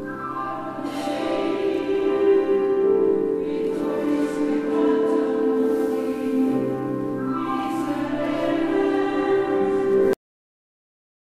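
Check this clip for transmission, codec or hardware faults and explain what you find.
There is one fault, a cut-off end. At 10.13 s the audio stops abruptly in the middle of a sound. It falls straight to digital silence, which lasts for the remaining 1.1 s or so. The final buffers of audio were never written or played back, so the recording simply ends there. Nothing fades or decays. The sound is chopped off mid-event, and dead silence follows with no room tone or tail.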